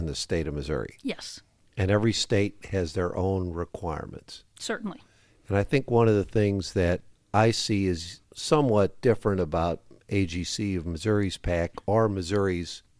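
No technical faults are audible.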